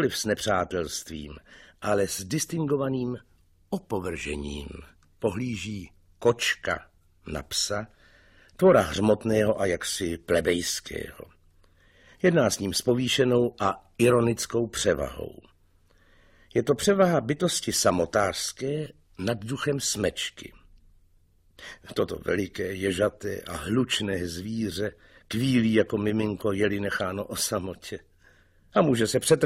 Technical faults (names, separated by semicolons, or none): none